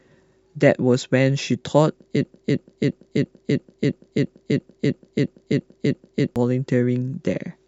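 From 2.25 to 6.36 s, a broken-record loop replays a 0.34 s speech fragment 12 times, likely a stalled stream; the spectrogram shows identical repeating blocks.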